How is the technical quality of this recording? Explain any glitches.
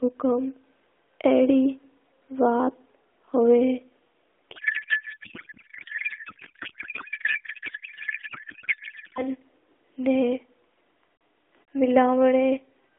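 The recording has one serious glitch in the middle. Outside it, the speech comes through a narrowband AMR mobile link. Nothing passes above about 3.5 kHz or below about 300 Hz, and there is light codec colouring, which fits the 12.2 kbps mode.

From 4.56 to 9.24 s there is a codec payload misread. The sender packed the AMR frames octet-aligned, and the receiver read them as bandwidth-efficient. Every field lands in the wrong bits, yet each frame still decodes. The speech is replaced by garbled noise and warble that barely tracks it. Normal sound returns once the framing matches again.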